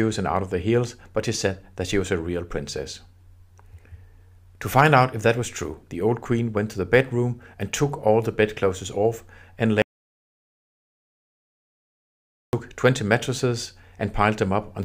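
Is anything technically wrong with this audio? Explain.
Yes. From 9.82 to 12.53 s there is an audio dropout to silence. The input was likely lost, leaving silence with no room tone, unlike a gated pause.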